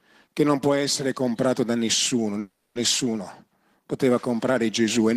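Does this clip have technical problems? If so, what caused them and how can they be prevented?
Yes. Packets were likely held up in transit and the jitter buffer ran empty. From 2.39 to 2.77 s, just after "essere comprato da nessuno", the last sound is stretched into a fading continuation for 360 ms: a call audio freeze. The audio then resumes where it stopped, with nothing lost, but now 360 ms later. A larger or adaptive jitter buffer, plus a steadier network path with less queuing, would prevent it.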